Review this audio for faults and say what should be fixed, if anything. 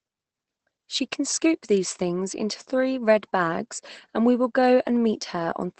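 The whole clip carries Opus voice compression, and the damage is plainly audible. Nothing reaches above about 8.7 kHz, which matches SILK's wideband mode, where the linear-prediction coder discards everything beyond roughly 8 kHz. The speech sounds muffled and slightly hoarse and robotic because the excitation is coded coarsely, which points to a low bitrate of around 12 kbps. To prevent this, encode at a higher bitrate so Opus keeps the full band and finer excitation detail.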